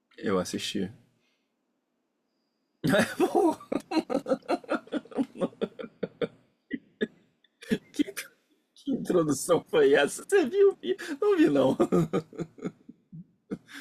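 Nothing technically wrong can be heard anywhere in the speech recording, which carries no audible fault.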